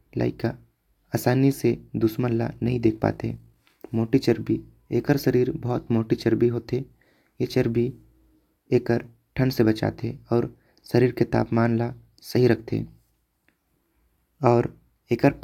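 Between 2.52 and 3.57 s, overlap-add ripple appears: the speech was split into windowed frames and rejoined with overlaps that fail to sum to constant gain. The level pulses by about 6 dB once per frame, around 50 times a second, giving a metallic buzz.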